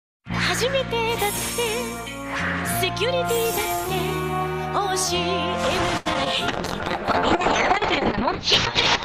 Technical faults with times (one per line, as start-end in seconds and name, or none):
5.97-6.07 short stall from a late packet
6.13-6.28 short concealed packet loss
6.48-9.04 call bitrate drop